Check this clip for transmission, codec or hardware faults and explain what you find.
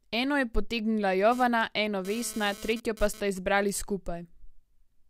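One hardware fault is present. GSM phone buzz runs from 1.32 to 3.20 s, after "je potegnila". A nearby phone's data bursts get rectified, producing a raspy 217 Hz buzz that comes and goes, about 18 dB below the speech.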